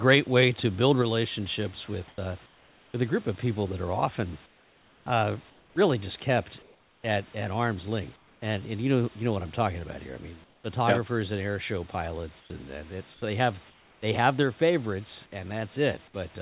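Speech over a call path that cuts everything above 4 kHz, which fits narrowband G.711, with a quiet room background underneath. Right at the start, 0.08 to 0.15 s, there's microphone overload: the input was likely driven about 2 dB past the converter's limit, so a small share of peaks get their tops sheared off and that opening syllable picks up a clipped, crackly edge. Then the microphone volume steps down at 1.02 s by about 3 dB and again at 14.43 s by about 2 dB, each an abrupt drop in voice and background together, likely the sort of one-shot correction call software makes when it thinks the mic is too hot. There is also comfort noise in place of the background, six times: 2.08 to 2.94 s (ending just before "a group of people"), 4.46 to 5.76 s, 6.62 to 7.04 s, 8.16 to 8.42 s, 10.44 to 10.64 s (right after "about here I mean") and 12.4 to 14.02 s (after "yep and air show"). In each gap the real room sound likely gives way to smoother synthetic noise, and in the third, fourth and fifth it sits about 5 to 7 dB lower. 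Tied to that, the onset is clipped by the voice detector at 2.16 to 2.18 s and 5.74 to 5.76 s. About 20 ms of the start is missing each time, likely because the detector was slow to wake up, so the sound snaps in without its soft attack.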